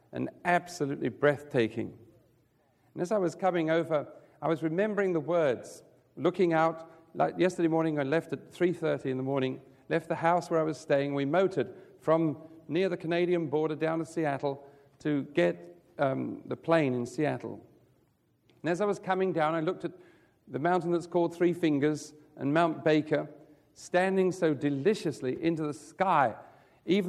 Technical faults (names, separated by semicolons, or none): clock slip clicks